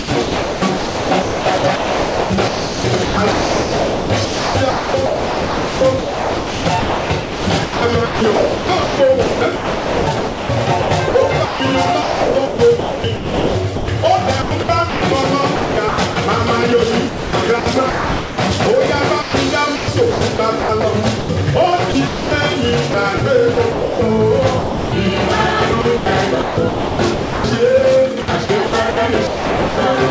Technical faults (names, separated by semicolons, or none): sound chopped by the voice detector